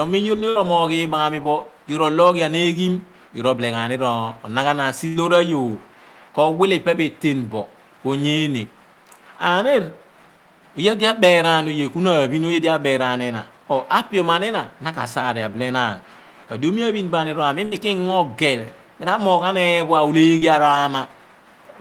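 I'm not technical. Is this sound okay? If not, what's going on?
No. The speech has small dropouts where parts of the call never arrived.

There are three bursts of packet loss: at 0.49 to 0.57 seconds, at 5.07 to 5.17 seconds, and at 17.65 to 17.74 seconds. At 5.07 it falls between "ghan ni ronaghanan si" and "ayoor ko wile pe". Each time, about 60 to 80 ms of speech was lost. The receiver stretched the last sound and faded it out. You hear a brief held buzz or fading hiss, then the speech jumps ahead.

At 20.38 to 20.43 seconds there is a short concealed packet loss. About 40 ms went missing. The receiver patched the hole by continuing the previous sound, then blended back in. This is quicker and gentler than the bursts. It comes across as a tiny smear or wobble, and a short sound may drop out.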